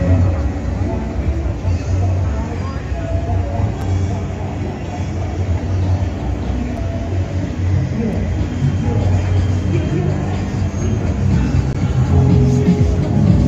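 At 3.81 s and 6.77 s, blocks of digital silence of 5.8 ms each, which fits an unfilled 256-sample buffer, then 2.95 ms at 8.13 s and 17.4 ms at 11.73 s. Each cuts hard to silence and back with no fade, unlike a single-spike click.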